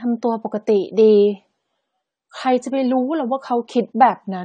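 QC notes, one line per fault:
Throughout, AAC compression: the speech is dull and smeared, with plainly audible codec damage and a warbling, fizzy texture on sustained sounds and sibilants. Nothing is present above 9 kHz. The damage likely comes from AAC-LC encoding at a bitrate around 32 kbps. The encoder discards and coarsely quantises high-frequency detail frame by frame. On a spectrogram, energy stops at a flat ceiling near 9 kHz, with blocky smearing below it.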